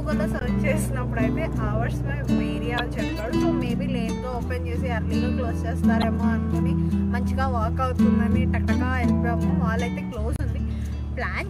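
Damaged data in a compressed stream at 0.39–0.43 s, 2.78–2.80 s, 6.01–6.04 s and 10.36–10.40 s: corrupted bytes make the decoder misread frames and lose sync until it finds the next frame header. Each event is a brief chirp or blip, about 25 to 40 ms long.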